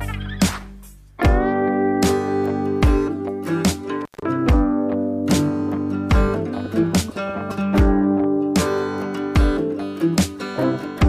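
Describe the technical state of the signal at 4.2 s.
At 4.2 s the signal is in an intermittent contact fault, running from 4.01 to 4.22 s. A loose plug or cable opens the line for about 135 ms. The sound drops out with crackle at each edge. Faint hiss remains while the contact is open.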